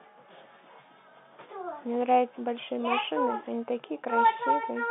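There are no technical faults to describe in this clip.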